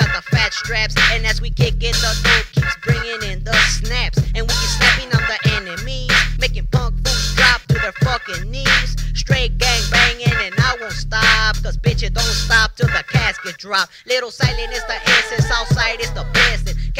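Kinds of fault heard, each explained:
Nothing stood out on listening; no problems could be heard anywhere in the clip.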